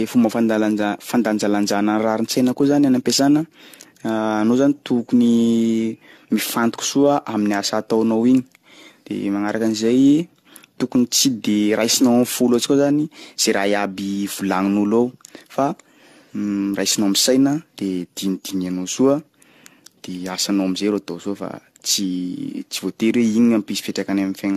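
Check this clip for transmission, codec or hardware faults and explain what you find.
One codec fault runs through the whole recording. Generation loss: the speech was likely re-encoded around seven times with AAC-LC at a rate consistent with 64 kbit/s. Each pass requantises on a shifted frame grid. The speech sounds swirly, hollow and smeared, with blurred consonant attacks and nothing above 14 kHz.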